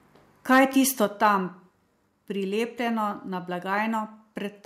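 From 0.52 to 0.64 s the loudest peaks sound harsh and crackly, likely microphone overload driving the input about 3 dB past the converter's limit. On the waveform the tops are sliced flat, and the spectrogram shows broadband smearing. At 1.05 s everything drops about 4 dB at once, likely the microphone volume stepped down by the call software. The waveform envelope shrinks in a single clean step. From 1.24 to 1.28 s a shorter, milder overload appears, likely about 1 dB over, with a few flattened peaks. At 2.07 s a second step down of about 2 dB, likely from the same software correction, lowers sound and background together.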